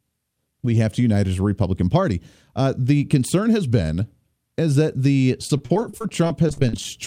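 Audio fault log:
5.47–6.85 s: repeated packet loss (robotic sound). The speech breaks up into a rapid run of short holes, which points to around twenty lost or late packets. The longest hole lasts about 36 ms. Each hole is patched by stretching the sound just before it. That patching fills about 296 ms, roughly a fifth of the stretch. The holes come so close together that the speech sounds choppy.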